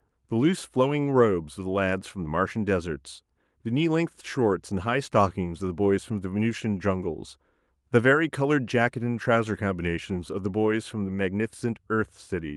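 Nothing in this bit of speech sounds off at any point, so there's no fault to walk through here.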